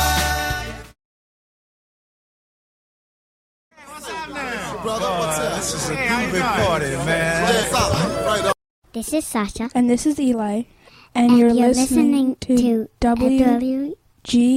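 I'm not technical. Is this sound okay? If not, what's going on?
No. At 7.63 s there is a skip ahead: about a second of sound was thrown away and playback jumps straight to later audio. Unlike a dropout, there's no silent hole. The two sides are stitched together almost seamlessly, so something is simply missing.

There are also two stretches of jitter buffer speed-up, from 8.54 to 10.56 s (about 9% faster) and from 11.21 to 13.80 s (about 7% faster). The system trimmed tiny slivers, roughly a fifth of a second in total each time, to catch up after delays. The sound hurries, but the pitch stays the same, unlike a fast-forwarded recording.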